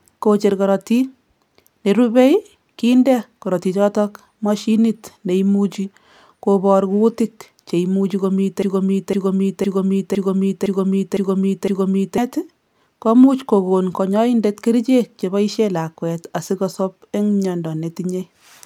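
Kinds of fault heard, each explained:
Broken-record loop: From 8.62 s to 12.18 s the speech stops advancing and a single fragment about 0.51 s long plays seven times back to back, each repeat identical and joined to the next without a gap. This is likely a stalled player, encoder or stream that kept re-sending the last block it held. Whatever speech belonged in those three and a half seconds never arrives, and the clip resumes further on.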